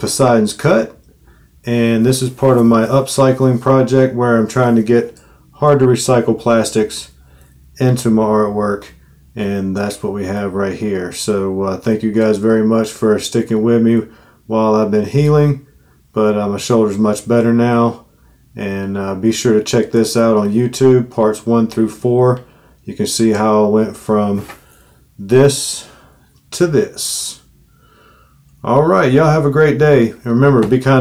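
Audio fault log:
No faults heard in this recording.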